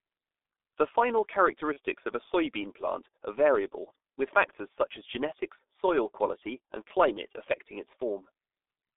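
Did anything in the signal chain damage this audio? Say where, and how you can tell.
Yes. Throughout, the speech sounds muffled, hoarse and smeared, confined to about 300 Hz to 3.6 kHz. That points to the G.723.1 codec at 6.3 kbit/s, whose slow 30 ms frames blur the consonants.

From 1.73 to 1.79 s, just before "of a soybean plant", a brief stretched sound fades out. This is VoIP packet loss concealed by the speech codec, consistent with one lost 30 ms frame that the decoder extrapolated from its last pitch and filter while lowering the gain.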